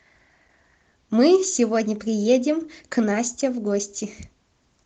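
Speech, carried through Opus voice compression with only light coding colour audible, and no technical fault to report.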